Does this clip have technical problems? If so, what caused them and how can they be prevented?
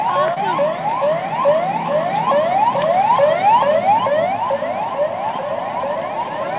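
Yes, there's a short concealed packet loss at 0.34 to 0.38 s. About 20 ms never arrived, so the receiver stretched the preceding sound over the gap, leaving a quick smear. A larger jitter buffer or forward error correction would help cover gaps like that.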